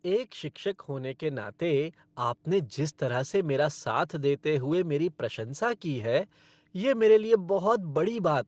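From 0.86 to 3.39 s, after "एक शिक्षक", automatic gain rising lifts speech and background together by about 5 dB, visibly widening the waveform envelope.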